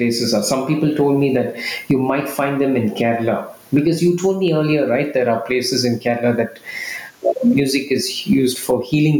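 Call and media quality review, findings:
Gain pumping throughout the speech: level pulled down on each loud sound, loud and soft parts squashed closer together, roughly 15 dB swing. Likely input gain set too high, fast limiter clamping peaks.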